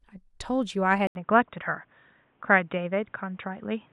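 Speech, with the sound turning dull and boxy from 1.07 s to the end: a gap of 80 ms, then nothing above 3.8 kHz, a level shift of about 5 dB and faint new background noise. This is likely the input switched to a poorer device.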